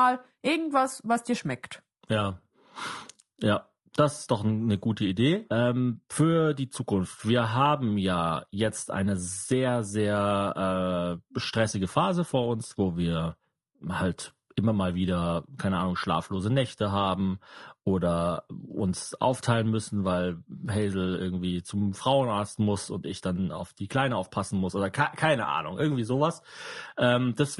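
Low-delay AAC compression runs throughout: the speech sounds rough and grainy, likely from AAC-ELD's short frames smearing harmonics at a rate that fits 32 kbps.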